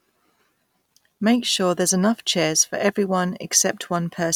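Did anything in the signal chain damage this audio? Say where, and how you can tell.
No, nothing in the signal chain audibly damages this recording. None of the stages, from the analogue wiring through to playback, leaves any trace that can be heard in the speech.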